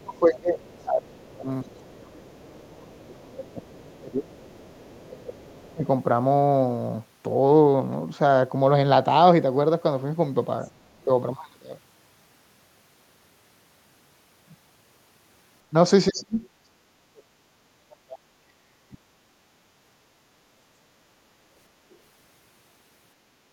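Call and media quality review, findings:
Speech suppressed in double talk at 0.0–4.34 s, 5.06–5.85 s and 16.1–19.02 s. Talker dips and chops out, down by about 25 dB in the first two spots and about 40 dB in the last. Likely the echo canceller: it can't split near-end speech from loudspeaker echo while both sides talk, so it ducks everything. The 16.1 s stretch is the worst, roughly three seconds of near-dropout.

Other side's voice leaking through at 0.36–1.77 s, 4.35–5.52 s, 10.76–11.05 s and 16.07–16.11 s. A faint second voice sits under the talker, about 30 dB down in the first two, about 40 dB at 10.76 s, and a brief blip about 20 dB down at 16.07 s. Likely residual echo: the far end is played on the loudspeaker, and the canceller isn't fully removing it from the mic. The 4.35 s leak runs right into the next suppression.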